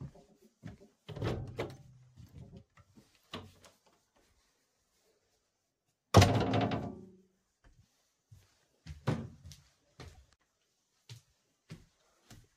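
At 10.14 to 10.17 s, a corrupt frame is decoded: a short run of compressed data, apparently spanning a few consecutive frames, arrived with damaged bits and was played rather than concealed. Misread gain values and spectral codes push energy into frequencies where the sound has none, so a brief, low-level chirp of stray noise, roughly 22 ms long, sits on top of the recording before the stream resumes cleanly.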